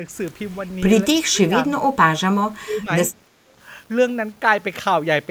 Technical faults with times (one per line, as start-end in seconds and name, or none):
0.00-5.30 low bit depth without dither
1.22-1.69 speech suppressed in double talk
2.57-2.90 speech suppressed in double talk